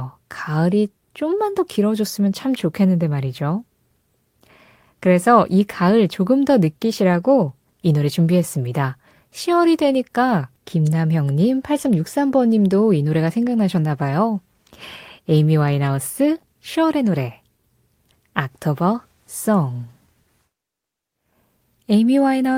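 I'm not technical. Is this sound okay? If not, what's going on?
Yes, this speech recording sounds fine. Nothing in it needs fixing.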